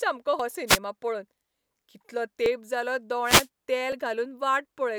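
At 0.40, 1.56, 2.46 and 3.92 s the speech jumps forward, with no gap of silence. These are dropped buffers (overrun), likely from the program failing to read its input before the hardware overwrote it, so roughly 20 ms of audio vanishes and the edges are spliced together. Wireless microphone noise hits occur from 0.67 to 0.78 s and from 3.24 to 3.48 s, heard as brief swishes of static over the voice as the FM radio link faded and receiver noise rose.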